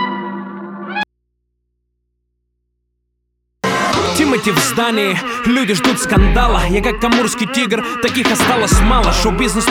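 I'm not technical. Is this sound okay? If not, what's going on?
No, there's an audio dropout to a faint residue: from 1.03 to 3.64 s the sound cuts out abruptly, leaving only quiet hum, likely from a live but empty input.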